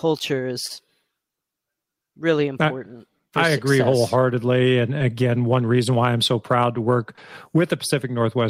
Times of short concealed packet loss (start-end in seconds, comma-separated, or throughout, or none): 0.67-0.72, 4.98-5.02, 7.16-7.19